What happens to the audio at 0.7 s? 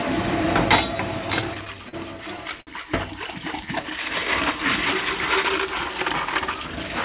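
Nothing goes wrong at 0.7 s; the sound carries straight through, shaped only by the call path's G.711 A-law coding, which leaves nothing above 4 kHz.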